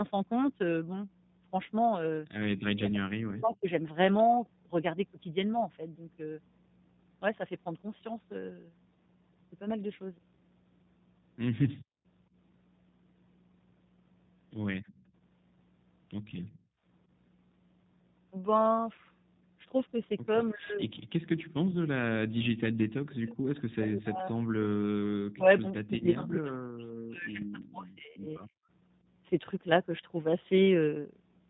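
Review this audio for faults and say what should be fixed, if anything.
A ground loop or a nearby transformer is coupling the power line into the signal, which puts mains hum under the whole recording: a steady 60 Hz tone with some low harmonics, sitting about 30 dB below the speech. It is most exposed in pauses, where nothing masks it. To prevent it, break the ground loop with balanced cabling or an isolator and keep the microphone path away from transformers and power supplies.

The call was carried over the G.729 codec, which fits its 8 kbit/s rate. Rather than sending the waveform, it rebuilds speech from a vocal tract filter, a pitch predictor and a few pulses per frame. Nothing above 4 kHz survives, and the damage is plainly audible as a rough, slightly synthetic edge on the speech throughout. Negotiating a wideband codec such as G.722 or Opus for the call would prevent this.

Background gating by the echo canceller happens at 11.78 to 12.05 s, 14.80 to 15.04 s and 16.58 to 16.83 s. 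Each time, while the far end was playing through the loudspeaker, the canceller pulled the microphone down hard. The room sound drops out by about 39 dB in the first two and about 23 dB in the third, then snaps back once the canceller releases. Gentler suppression with comfort noise filling the gaps would prevent it.

An echo leak appears from 16.46 to 16.58 s. The likely cause is a loudspeaker at one end whose echo canceller left part of the microphone pickup in place and sent it back. The result is a faint, short, delayed copy of the speech about 203 ms behind the original and around 35 dB down, just before the third gating dip. A better-converged canceller, or a headset at that end, would prevent it.

Speech is suppressed in double talk at 20.54 to 21.29 s, 22.25 to 24.80 s and 25.34 to 28.52 s. The likely cause is both sides talking at once, leaving the echo canceller unable to separate its own talker from the loudspeaker echo, so it turned everything down. 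The talker's speech dips by as much as about 40 dB or drops out in pieces over these stretches. A canceller with proper double-talk detection, or headsets, would prevent it.

VoIP packet loss, concealed by the speech codec, occurs at 21.71 to 21.76 s and 25.98 to 26.04 s. Each gap is 20 ms, which fits two lost 10 ms frames. The decoder filled the gaps by extrapolating its last pitch and filter at falling gain, so the sound smears and fades, and stays weak for a moment after packets resume. A jitter buffer with forward error correction, or a steadier network path, would prevent it.

The call microphone's high-pass filter is also present, taking out only the lowest bass, which is normal.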